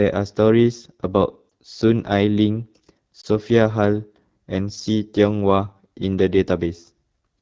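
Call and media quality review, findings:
AMR wideband (HD Voice) codec throughout. Rough, raspy speech with a thin, noisy top band. The damage fits one of the lowest AMR-WB modes, around 8.85 kbit/s.

Lost AMR speech frames at 1.50–1.52 s and 3.21–3.25 s. Brief dip or warble as the decoder repeats its last pitch and tract settings at falling gain. Each fits one lost 20 ms frame.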